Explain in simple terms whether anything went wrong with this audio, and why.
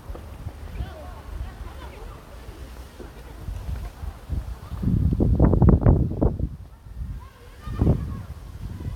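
Nothing went wrong; no faults can be heard here.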